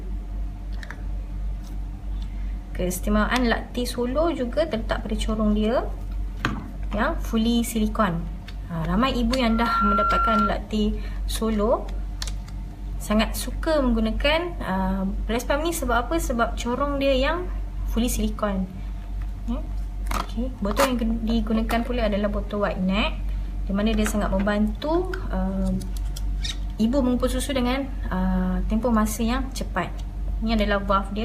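At about 9.40 s there's a loudspeaker feedback squeal that runs to 10.54 s. A single tone at 1.4 kHz swells up over roughly a third of a second and then sits a few dB above the rest of the sound. That's the mic hearing its own loudspeaker, with the loop gain tipping past one at that frequency so it keeps feeding itself.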